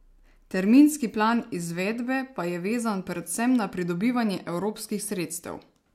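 Nothing technically wrong can be heard in this speech recording, with no audible disruption to the signal at any point.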